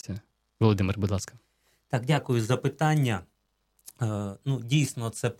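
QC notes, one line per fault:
0.00–2.18 s, wrong sample rate: speech runs about 1.09 times fast and 1.47 semitones high, consistent with 44.1 kHz audio played at 48 kHz, until "за питання".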